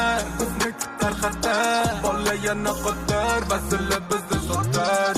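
No technical faults are audible anywhere in the clip.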